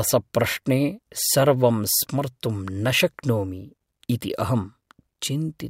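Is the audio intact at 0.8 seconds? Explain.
Yes, at 0.8 seconds the speech plays through cleanly, with no dropout, click, distortion or other fault at that point.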